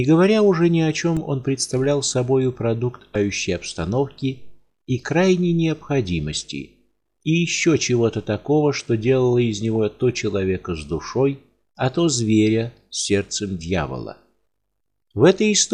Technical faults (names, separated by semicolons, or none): damaged data in a compressed stream